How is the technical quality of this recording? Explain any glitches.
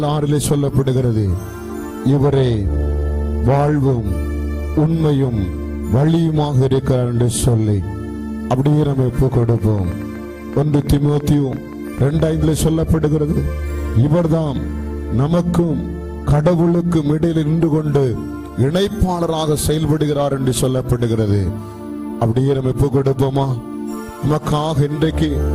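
A train of clicks mars the recording from 9.43 to 12.27 s: around thirty sharp, similar-shaped ticks at roughly 9.5 per second, unevenly spaced, peaking about as loud as the sound itself. The likely cause is interference from nearby equipment or a faulty connection or power supply injecting repeated pulses.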